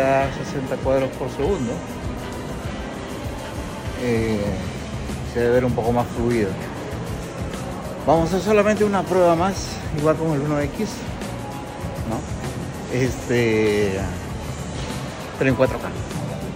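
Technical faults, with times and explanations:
No technical faults can be heard anywhere in this audio. Nothing along the way calls for a time or an explanation.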